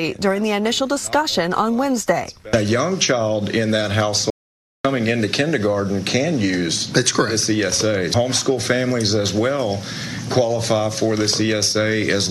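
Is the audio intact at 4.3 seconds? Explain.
No. At 4.30 s there is an audio dropout to silence lasting about 0.54 s, to 4.84 s. The sound stops abruptly mid-flow and resumes just as suddenly, and the gap holds silence with no room tone at all. That total absence distinguishes it from a noise gate or a fade, which leave some residual floor or taper gradually. The likely cause is a brief loss of input, with the recorder writing silence until the signal returned.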